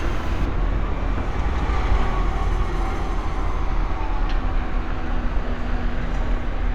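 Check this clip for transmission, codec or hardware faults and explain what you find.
One fault is present. From 0.46 s to the end, the sound turns dull and muffled, with the top end sloping away to about 10 dB down at 10 kHz relative to 1 kHz. This is de-emphasis applied wrongly: a treble-cut filter meant to reverse pre-emphasis was applied where no boost existed, or applied twice.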